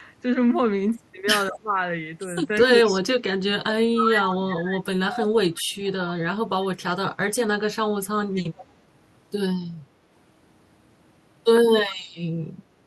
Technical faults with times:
1.50-1.77 speech suppressed in double talk
1.55-1.59 echo leak
2.62-3.00 echo leak
2.65-3.13 speech suppressed in double talk
3.54-6.11 speech suppressed in double talk
4.30-4.35 echo leak
5.84-5.91 echo leak
8.34-8.65 echo leak

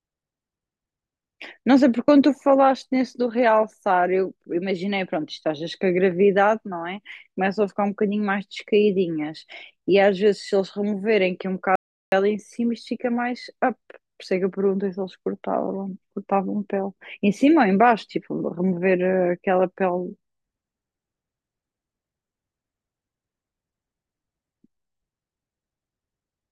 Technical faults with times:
11.76-12.12 audio dropout to silence

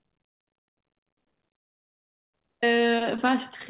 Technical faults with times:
1.56-2.35 call audio freeze
2.62-2.65 skip ahead

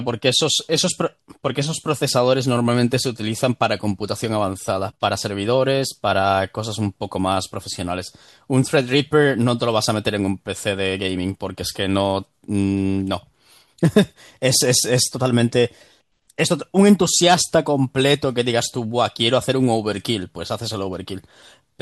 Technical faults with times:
none

